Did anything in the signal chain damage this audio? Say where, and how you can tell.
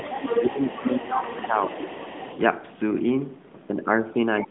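Yes, at the call-processing stage, where the echo canceller sits. From the start to 2.38 s a second voice runs under the main speech, roughly 10 dB quieter. This is the other side's voice leaking through, likely because the canceller left part of the loudspeaker signal in the microphone feed. It isn't crosstalk in the wiring, because it stops at 2.38 s rather than running for the whole clip. It is also band-limited by the narrowband call path, the same as the main speech.

Speech is suppressed in double talk in the same stage, while that leaked voice is present. From 0.35 to 0.59 s and again from 0.77 to 1.76 s the main speech dips by up to about 15 dB. The canceller was likely unable to tell the talker from the echo and turned both down. A codec dropout would sound different: it would cut out in clean frame-sized gaps regardless of the other voice. These dips happen only during overlap.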